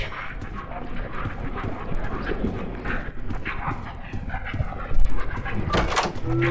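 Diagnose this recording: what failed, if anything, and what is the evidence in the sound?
Sample-rate conversion: the resampler restarts on every block. Regular ticks at 20 Hz run throughout with the signal, matching 50 ms blocks, likely converted from 24 kHz to 16 kHz.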